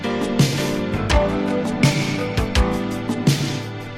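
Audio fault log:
0.48–0.54 s, AAC frame loss with concealment: a brief patch of about 43 ms loses its definition and turns smeared and noisy, with a hollow, phasey edge, before clean audio resumes. The gap's length fits a single dropped AAC frame. With no data for that block, the decoder rebuilt it from the last good spectrum, reusing its energy shape but with scrambled or guessed phases. The outline of the sound survives while its detail is lost.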